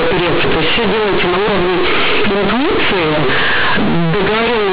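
Mu-law companded audio read as linear throughout this speech recording: the logarithmically coded G.711 bytes are played as plain 8-bit samples with no expansion. Every sign change jumps across roughly half the output range, so quiet passages blare as loudly as strong ones, producing harsh, buzzy distortion and heavy noise filling the pauses. The telephone band is still audible underneath, cutting off near 4 kHz, which fits 8 kHz mu-law telephone coding.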